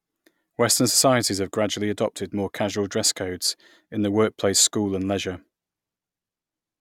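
No technical faults are audible.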